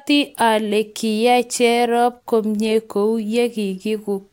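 No technical fault can be heard anywhere in the recording; the signal stays steady and intact throughout.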